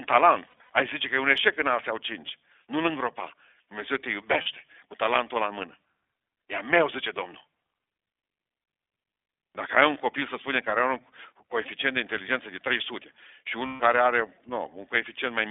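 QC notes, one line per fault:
throughout, iLBC codec: sound confined to about 300 Hz–3.6 kHz, slightly rough and synthetic, fitting 15.2 kbps iLBC; steady narrowband coloration, not dropouts.
0.46–0.70 s, 4.42–4.47 s, 10.20–10.22 s, 13.66–13.81 s, lost iLBC frames: brief buzzy held-vowel fills where the decoder repeats the last pitch cycle; speech recovers immediately, unlike codecs needing resynchronisation.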